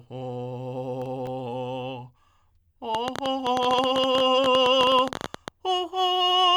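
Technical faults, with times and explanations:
1.02–1.27 s, processor overload crackle: a handful of sub-millisecond buffers miss their deadline and drop to silence, showing as hard-edged waveform gaps and thin broadband spectrogram streaks.
2.95–5.49 s, train of clicks: about 14.2 irregularly spaced pulses per second, roughly 40 total, spiking about 15 dB above the music, likely from electrical interference; vertical spectrogram lines.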